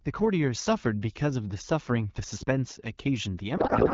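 Codec payload misread from 3.57 s to the end at 3.93 s: the final stretch of speech collapses into garbled noise and warble that barely tracks it, because octet-aligned AMR frames are being unpacked as bandwidth-efficient ones, putting every field in the wrong place. Before that, the speech comes through the AMR wideband (HD Voice) codec clearly, with only light coding damage, consistent with its 12.65 kbit/s mode.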